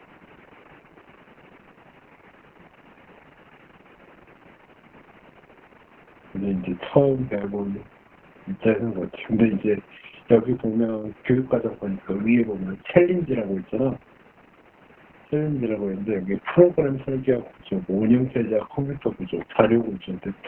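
From start to finish the speech carries heavy Opus voice compression. The SILK coder has cut the band at 4 kHz and coded the excitation coarsely, which fits a bitrate near 6 kbps. The result sounds muffled, hoarse and faintly robotic. A spectrogram shows a hard ceiling at 4 kHz with blurred harmonics. The room noise, about 29 dB below the speech, is part of the recording.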